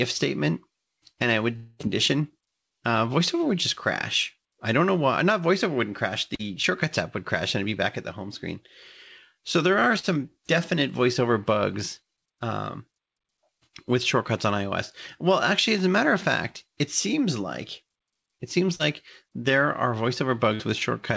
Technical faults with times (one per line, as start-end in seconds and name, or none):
1.56-1.82 long network dropout
6.35-6.42 short concealed packet loss
9.99-10.06 short concealed packet loss
18.75-18.82 short concealed packet loss
20.55-20.62 short concealed packet loss